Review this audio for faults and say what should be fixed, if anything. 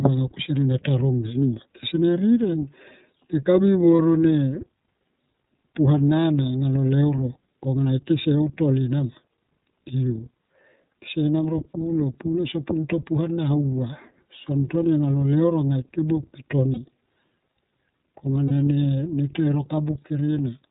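The speech runs through the iLBC codec, likely in its 30 ms, 13.33 kbps mode, which strips everything above 4 kHz and leaves the voice audibly rough and synthetic.

Lost iLBC frames at 3.96 s (just before "ro ne"), 16.74 s and 18.48 s: each roughly 30 ms gap is concealed by repeating the last pitch cycle with noise, giving a brief buzzy held vowel before the voice recovers.

To prevent this, use a wideband codec with forward error correction and a jitter buffer on a network path with less packet loss.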